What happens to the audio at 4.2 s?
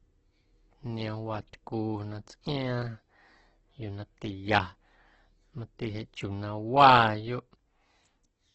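At 4.2 s the speech is still under the Opus compression that runs through the whole clip. The encoder is likely starved of bits, which fits a rate near 12 kbps in its CELT music mode. It fills bands it can't afford to code with noise or folded copies of lower bands. Here that makes the speech grainy and rough, with heavy damage, and the wideband cut-off leaves nothing above about 8.1 kHz, so the sound is dull.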